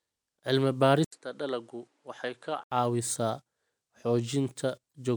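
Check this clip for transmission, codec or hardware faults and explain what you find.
Two faults stand out in this speech clip: a stretch where the input sounds as though it moved to a lesser microphone, and a brief decoding glitch near the end.

From 1.04 s to 2.72 s the speech turns duller and somewhat quieter, about 5 dB down, with nothing above 11.4 kHz and a new background noise roughly 40 dB under the voice. An 80 ms gap marks the change. This is likely an input switched to a poorer device: the recording path jumped to a narrower-band microphone with its own level and noise floor.

Between 4.89 s and 4.93 s there is a short glitch. That points to damaged data in a compressed stream: corrupted bytes made the decoder misread a frame, lose its place, and resume at the next valid frame boundary.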